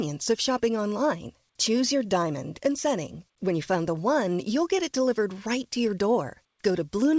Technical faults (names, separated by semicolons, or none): none